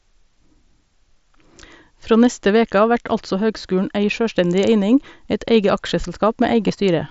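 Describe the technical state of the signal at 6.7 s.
At 6.68 s, concealed Bluetooth headset packet loss: about 15 ms of missing audio was patched by repeating a best-matching recent stretch, showing as a brief periodic, repeated waveform segment.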